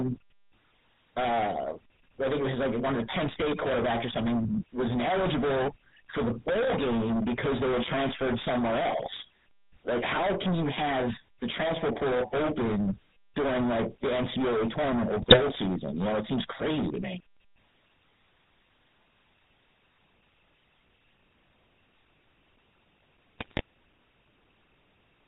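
From start to finish the speech is driven into hard clipping. Some stage in the chain was fed a signal about 27 dB hotter than it could pass, so the waveform is sliced flat at the ceiling on roughly a third of its samples. Those squared-off tops throw harmonics high into the spectrum, and with this much overload every loud syllable carries a harsh, fuzzy distortion rather than the occasional crackle on a peak.

Also throughout, the audio has gone through the GSM full-rate codec. Its damage is plainly audible and fits the original 13 kbps GSM coder. That coder rebuilds the voice from a vocal-tract model excited by sparse, evenly spaced pulses. The result has a gravelly, buzzy grain layered over the clipping distortion, and the response stops short at 4 kHz, leaving the sound dull and boxed-in.

From 15.22 to 15.39 s, GSM bit errors corrupt the decoder's input. The errors hit several consecutive frames, consistent with a bit error rate near 2.5 percent. 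Damaged filter, pitch and gain parameters bend the spectrum and throw the level around, so the speech briefly breaks into squawks and gargling pops. The same fault returns from 23.39 to 23.61 s at a similar error rate but spread over more frames, giving a slightly longer burst of the same mangled, squawking breakup.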